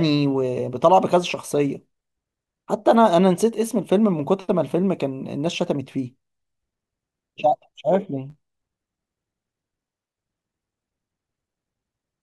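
A speech recording that, from 8.29 s to the end at 12.22 s, develops a block size mismatch (truncated). One stage writes blocks that fit 512 samples, and the next reads fewer, discarding each block's tail. The splices produce a buzz at 91.9 Hz, and the speech runs 1.07 times fast at roughly normal pitch. On a spectrogram, evenly spaced vertical lines and harmonics of 91.9 Hz appear; the waveform shows regular small discontinuities about 11 ms apart.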